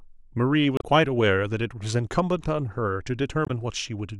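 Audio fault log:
0.77–0.84 s and 3.44–3.51 s, damaged data in a compressed stream: corrupted frames throw the decoder out of sync, giving brief glitches that interrupt the speech harmonics.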